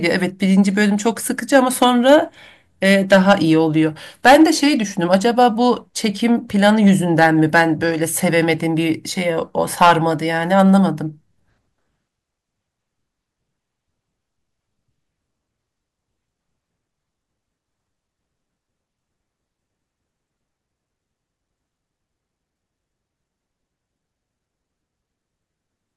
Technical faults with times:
1.54-2.15 hard clipping
4.26-4.43 hard clipping
6.64-7.62 hard clipping
9.82-9.92 hard clipping

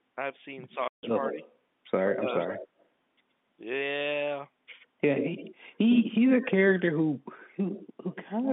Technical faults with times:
0.71-0.75 echo leak
0.88-1.03 packet loss filled with silence
1.24-1.51 echo leak
2.09-2.68 echo leak
2.17-2.27 speech suppressed in double talk
4.80-5.55 echo leak
5.90-6.74 echo leak
7.39-8.49 echo leak

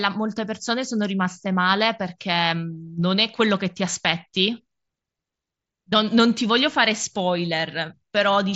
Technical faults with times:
none

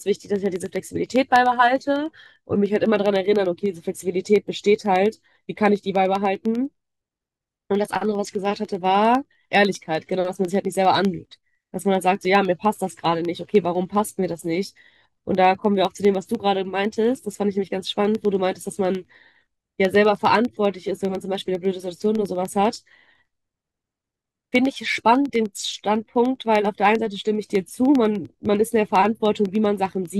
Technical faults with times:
0.06-30.05 periodic USB or driver dropouts

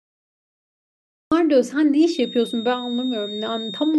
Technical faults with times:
0.00-1.32 cut-off start
2.00-3.99 feedback whistle

